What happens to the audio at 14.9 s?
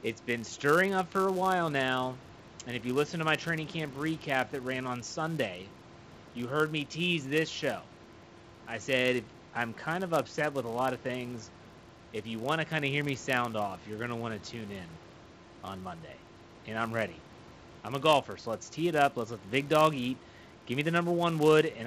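A filter restarted on every block is active at 14.9 s, as it is throughout the clip. The filter drops its memory at each block boundary and restarts from silence, so every block opens with a small transient. These repeat as a buzz at about 172 Hz, which fits a 256-sample block, and the buzz rises and falls with the level of the speech.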